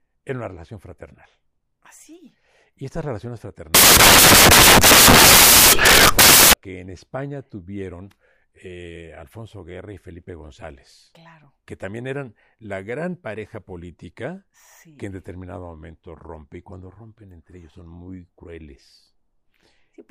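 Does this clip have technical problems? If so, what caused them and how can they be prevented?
Yes. From 3.75 to 6.53 s, right after "y estas relaciones" and up to "que en", the speech gives way to loud, harsh broadband noise. These are samples built from the wrong bytes. The reader misassembles each sample, so the rapidly changing low-order bits end up as the most significant part of the value and the signal turns into harsh noise. To prevent it, make sure the decoder's byte order, offset and alignment match the actual file format.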